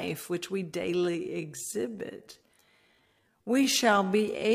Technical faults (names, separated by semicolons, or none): time-stretched section